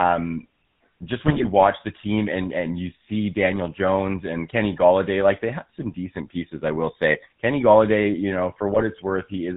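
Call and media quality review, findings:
GSM full-rate codec, whole clip: buzzy, gravelly speech, no content above 4 kHz; pulse-driven vocal-tract model with sparse excitation, consistent with 13 kbps coding.

GSM bit errors, 1.27–1.47 s and 8.74–8.85 s: squawks, pops, gargling; corrupted filter, pitch or gain parameters distort spectrum and level per frame.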